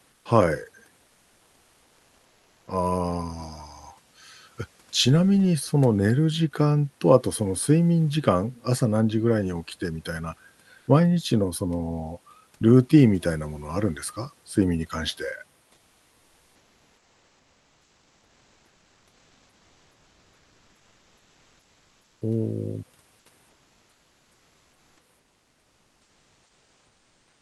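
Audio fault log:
0.09–0.25 s, 10.77–10.87 s, 15.73–22.21 s, 23.49–24.97 s, 25.19–27.42 s: comfort noise in place of the background. During pauses, the real room noise gives way to steady, featureless synthetic noise, about 1 to 3 dB quieter, likely from Opus discontinuous transmission.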